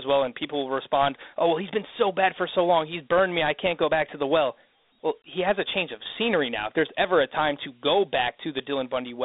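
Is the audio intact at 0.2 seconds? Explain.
No. Dialogic VOX ADPCM damage runs through the whole clip, including 0.2 s. Coarse 4-bit step coding, consistent with a 32 kbps stream, runs at a low telephone sample rate that confines the speech to a 250 Hz to 3.7 kHz phone band with nothing above 3.8 kHz, and the coding leaves a plainly audible gritty hiss trailing the speech.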